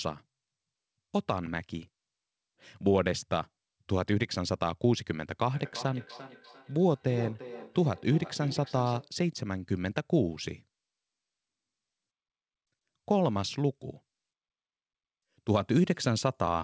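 Feedback echo between two devices, 5.53 to 9.14 s: another device's playback re-enters the microphone, repeating the speech roughly every third of a second, ringing, about 15 dB down.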